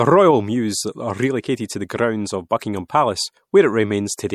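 MP3 compression, throughout the speech: plainly audible codec damage and nothing above 18 kHz, likely from a roughly 64 kbps encode where too few bits zero out weak frequency lines.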